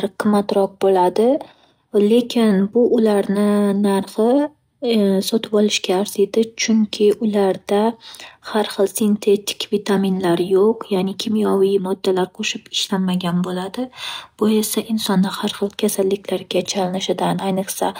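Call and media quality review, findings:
Imaging from linear upsampling, throughout the speech. Dulled top end, faint metallic shimmer on sibilants. Likely a 24 kHz stream raised to 48 kHz by straight-line interpolation; weak filter leaves mirrored spectrum at 12 to 24 kHz, about 30 dB down.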